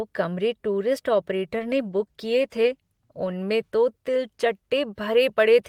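A speech clip where a call bitrate drop starts after "कमरे टूरिस्ट" at 1.54 s: the encoder is starved of bits, consistent with roughly 40 down to 16 kbps, so the sound turns coarse and muffled until 3.41 s.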